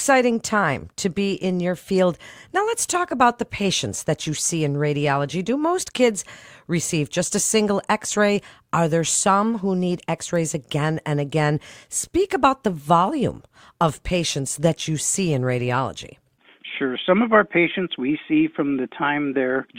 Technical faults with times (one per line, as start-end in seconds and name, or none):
15.30-19.78 adaptive stream at a lower bitrate